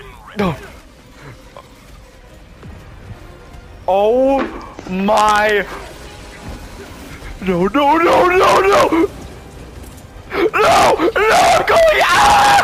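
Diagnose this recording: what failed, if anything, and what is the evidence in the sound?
Mains hum appears from 8.24 s to 9.91 s: a steady low tone at 60 Hz with a few low harmonics, sitting roughly 25 dB below the wanted signal. The fault belongs to the analogue wiring stage. A ground loop or a nearby transformer has coupled the 60 Hz power line into the signal path before conversion. It is confined to this span of under two seconds.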